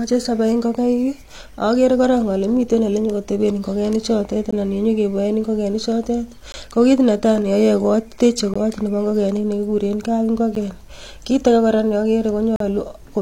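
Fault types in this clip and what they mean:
Gap between stream segments: Adjacent 2-second segments don't quite meet in time, so the player inserts silence. Hard-edged holes cut the speech at 4.51, 6.52, 8.54, 10.55 and 12.56 s. Most last 12 to 20 ms. The last runs 44 ms.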